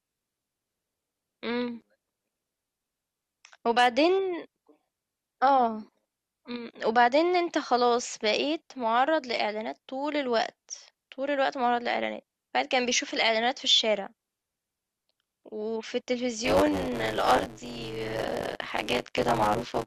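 From 16.44 s to the end of the clip, the speech takes on a robotic buzz at 100 Hz. This is buffer tearing: writer and reader of the ring buffer have slipped, so in each 10 ms period roughly a third of the audio is stale, about 20 ms old, with hard joins either side.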